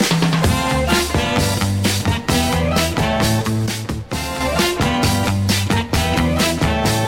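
The audio drops abruptly by about 6 dB at 3.66 s and returns to its earlier level at 4.41 s, a sudden gain jump lasting about 0.74 s. The sound and its background noise fall together in a single step rather than gliding, which sets it apart from a fade or compressor ducking, where the change is ramped. It is likely caused by a digital gain setting applied without smoothing.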